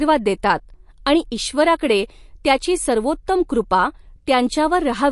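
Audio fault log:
Throughout, MP3 compression: the speech carries plainly audible codec damage, a watery, swirling texture where faint frequency detail flickers in and out from one frame to the next, and nothing remains above 11.3 kHz. This fits a low bitrate near 48 kbps, likely leaving the encoder short of bits. A simple low-pass filter would only dull the top end, but here the swirl and smeared detail below the cut-off show bits being rationed across the remaining spectrum.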